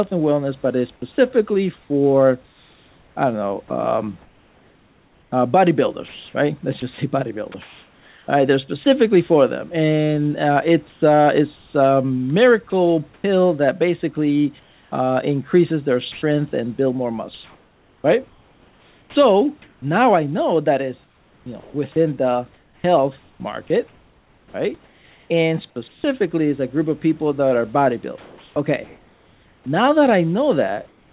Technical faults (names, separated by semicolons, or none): sound chopped by the voice detector; comfort noise in place of the background; onset clipped by the voice detector